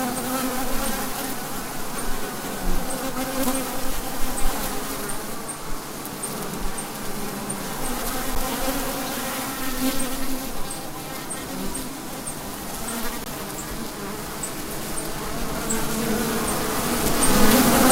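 A clip of everyday sounds with two brief underruns with held sample: at 8.35 s for about 10 ms, and from 13.24 to 13.26 s. The output buffer ran dry, so the waveform freezes flat at its last value, then picks up right where it stopped, with nothing lost and only a soft join.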